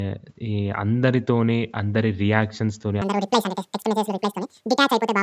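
A wrong sample rate takes over this speech clip from 3.02 s to the end at 5.22 s: audio captured at one rate is being played back at twice that rate with no conversion, which fits 16 kHz material clocked out at 32 kHz. Every sample goes by in half the time, so the speech runs at 2.0 times normal speed and its pitch jumps a full octave, 12 semitones, sounding high and hurried through the close.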